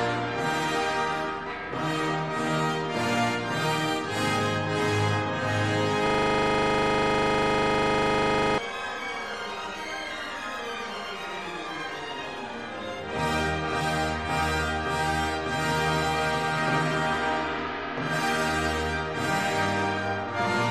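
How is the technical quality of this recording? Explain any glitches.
The recording is marred by one serious glitch, a system hang loop running from 6.07 to 8.58 s. During that stretch the computer or its audio driver stalled, but the sound hardware carried on playing out of its ring buffer, cycling the same 40 ms slice of audio over and over, roughly 60 times. Because each repeat is so short, the result is a rigid, mechanical buzz pulsing at 25 Hz rather than a recognisable stutter, until normal playback resumes at 8.58 s.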